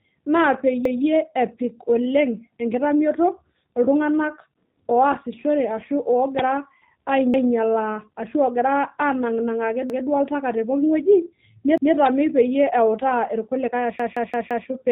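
Speech run through a G.729 codec at 8 kbit/s, so everything above 3.8 kHz is gone and the voice has that rough, slightly synthetic edge throughout. There's a repeated buffer at 0.85, 7.34, 9.90 and 11.78 s, each replaying a 0.17 s chunk once with a hard join (the first lands right before "epik oleng enkitamioto iltung'anak"), and at 13.99 s the same chunk loops four extra times until 14.68 s, which fits an 8192-sample buffer starving. At 6.39 s, just after "enkitamioto iltung'anak oasishore ashu", an uninitialised buffer spits out a loud 2.67 ms crack, consistent with a 128-sample block played from stale memory.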